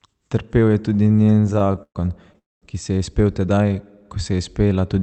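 Speech carried over a WebRTC call path, with Opus-style coding and audio band-limited near 8 kHz, shows repeated stalls (stutter) from 0.93 to 1.97 s. Around twenty brief waits, the longest 124 ms, are bridged by continuing the preceding sound. About a third of that span is filled-in time, so the audio drags without losing content. A call audio freeze follows from 2.38 to 2.64 s, just before "ki se je". The gap is roughly 0.2 s of near-silence, likely from packets held up in transit draining the jitter buffer, after which playback resumes where it stopped.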